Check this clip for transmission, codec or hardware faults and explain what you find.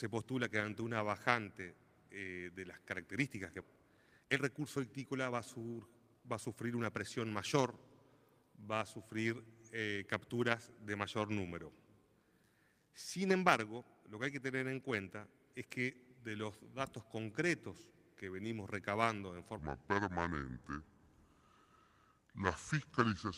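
Three faults turn up: a skip, a speed-up, and a slowed ending.

At 3.61 s the audio skips ahead, dropping roughly a second with no gap, so it jumps cleanly rather than falling silent as a dropout would.

From 3.67 to 6.75 s a jitter buffer speed-up trims pitch periods, running about 12% fast at unchanged pitch, around 0.4 s removed, unlike a resampling error.

From 19.59 s to the end, the section at the wrong speed plays at 0.715 times, dropping pitch about five semitones, likely from a clock mismatch rather than buffer adjustment.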